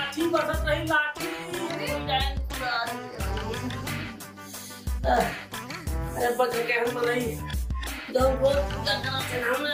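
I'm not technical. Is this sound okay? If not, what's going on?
Yes, it's fine; nothing here sounds wrong.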